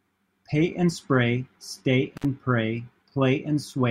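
At 2.17 s the speech drops out briefly: an intermittent contact, where a loose plug or cable connection opens for about 60 ms before closing again at 2.25 s. Crackle marks both edges of the gap, unlike a clean digital dropout's silent, click-free cut.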